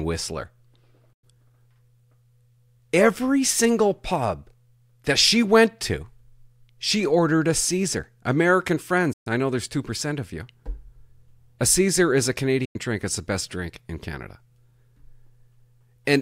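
Digital broadcast dropouts at 1.13, 9.13 (before "I know there's") and 12.65 s: the receiver mutes failed frames, so the speech fades out in 8 ms to silence for 0.1 to 0.14 s.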